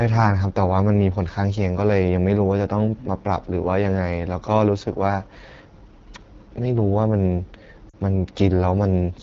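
AMR wideband (HD Voice) codec coding, throughout this speech recording, makes the sound rough and raspy, which fits one of the codec's lowest rates, around 8.85 kbit/s, where the pulse-driven vocal tract model cannot capture detail. Lost AMR speech frames at 7.89 to 7.95 s cause a roughly 40 ms drop to near silence, consistent with two frames failing their checksum while the decoder repeated the last good settings at falling gain.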